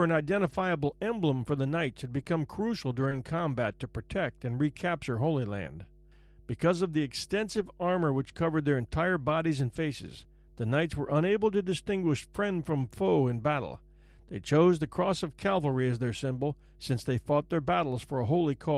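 Mains hum at 50 Hz runs through the whole clip, sitting about 25 dB below the speech. It is a steady low drone from power-line interference, most likely a ground loop or a nearby transformer coupling into the signal path. It does not rise or fall with the speech, so it is most exposed in pauses, where its low tone and low harmonics fill the silence.

Lost packets rebuilt from error correction first appear from 0.45 to 0.59 s and again from 2.15 to 2.21 s. The stream lost packets, but each following packet carried a low-bitrate copy of the missing audio, and the decoder played that copy. There is no gap, but the replaced stretches, 80 ms and then 40 ms long, sound coarser and grainier than the speech around them. The first span points to about four separate lost packets.

Short concealed packet loss follows at 2.23 to 2.27 s, just after "for the knights had". Here 20 ms of audio never arrived and no backup copy was available. 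The decoder extended the preceding sound, carrying its pitch forward or shaping noise to match, then crossfaded back into the real signal. The result is a brief smear or wobble at the join rather than silence. A second concealment at 3.09 to 3.13 s overlaps an error-correction rebuild at 3.11 to 3.13 s, just before "combat to protect and".

Further error-correction rebuilds occur at 7.55 to 7.65 s (60 ms), at 9.75 to 9.77 s, between "unable to distinguish friend" and "foe in battle" at 12.81 to 12.87 s, and at 15.91 to 15.93 s. Each one is a short grainy, lower-fidelity stretch instead of a dropout, ranging from 20 ms to 60 ms.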